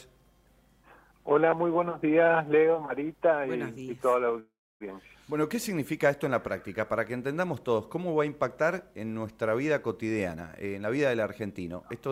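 At 4.39 s there's a call audio freeze lasting until 4.84 s. The last bit of sound gets stretched into a fading buzz or hiss, then goes quiet for about 0.3 s. It picks up right where it stopped, so nothing's lost, just about 0.41 s of added delay, likely from packets held up on the way and an emptied jitter buffer.

From 10.30 s to 12.08 s you get a jitter buffer speed-up. The receiver trims tiny pitch-period slices over and over to shed the extra delay, around a third of a second in total. Playback runs at about 119% speed at unchanged pitch, so it sounds noticeably rushed.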